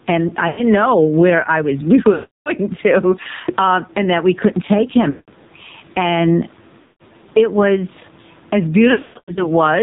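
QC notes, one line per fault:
Throughout: gain pumping. Level swings by roughly 10 dB, so loud and soft passages sit close together and the speech sounds squashed, likely from excessive input gain feeding a fast limiter or compressor.
Throughout: AMR narrowband mobile codec. Nothing above 4 kHz survives, and the speech is heavily buzzy and synthetic, with a warbling background. This is pulse-driven vocal-tract modelling at a very low bitrate, which fits the 5.9 kbps AMR-NB mode.
0.48–0.62 s, 2.14–2.51 s, 5.10–5.30 s, 6.82–7.03 s, 8.92–9.49 s: lost AMR speech frames. There are gaps of about 100, 320, 180, 180 and 320 ms. At 0.48 s the gap falls between "and i" and "know where i was". At 5.10 s it follows "that we couldn't take". At 8.92 s it follows "it was as" and is scattered over 440 ms, with the longest run 120 ms. The decoder repeats the last good pitch and vocal-tract settings at falling gain, so the sound smears, then fades toward silence and returns briefly weak or rough.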